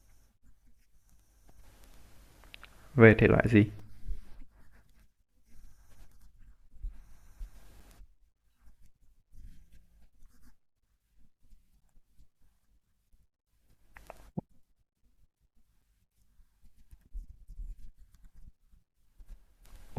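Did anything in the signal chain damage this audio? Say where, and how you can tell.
Yes. At playback, gaps between stream segments leave 4 to 13 ms silences at 3.79, 7.80, 11.81 and 15.82 s, one per 4 s segment join. Unlike dropouts, nothing is missing; timing just slips.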